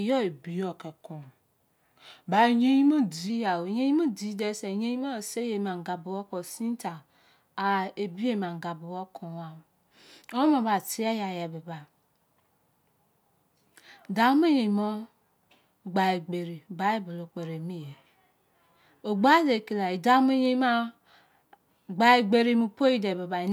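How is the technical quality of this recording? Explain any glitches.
The recording has one glitch, near the start. Wrong sample rate, 0.31 to 3.30 s: the samples play about 0.92 times too slowly, dropping pitch about 1.5 semitones, which fits 48 kHz audio played at 44.1 kHz. Speech there sounds slightly low and dragged.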